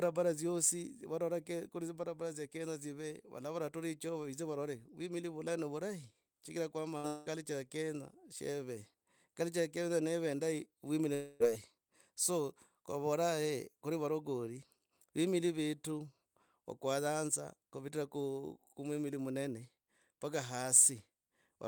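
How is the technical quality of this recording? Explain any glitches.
The speech is interrupted by three network glitches, close together around 7 s and again near 11 s.

At 6.97 to 7.06 s, just after "vula no vurahi chigira", a burst of packet loss dropped about 60 ms of audio. The receiver stretched the last sound over the gap, so it becomes a brief fading sound before the speech resumes slightly further on.

At 7.08 to 7.28 s, before "ya kenya sheve", and at 11.14 to 11.42 s, after "ya kenya neve indayi", what sounds like a long network dropout, likely caused by no audio arriving, cut out about 0.18 s and 0.26 s. Each gap is filled by a continuation of the last sound that fades without reaching silence, and the speech then jumps ahead.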